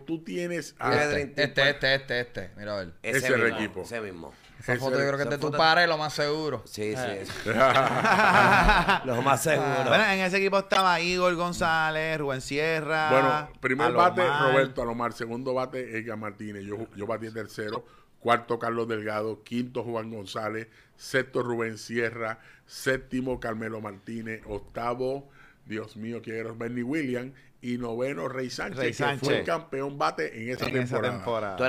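Short chirps and noise bursts break through the audio at 7.70–7.77, 10.73–10.82, 17.68–17.77, 22.80–22.86, 25.84–25.88 and 30.57–30.72 s, the last the longest and the one at 25.84 s the faintest. Each is a corrupt frame decoded: damaged compressed data was played anyway, scattering energy to wrong frequencies for a few frames.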